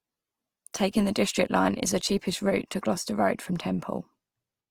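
From start to finish the speech sounds grainy and rough, with a noisy sheen over tones, which is likely Opus compression at a low bitrate near 24 kbps in music mode. Band energy is kept but filled with folded or noise content, so a spectrogram stays full-width yet looks speckled rather than holed.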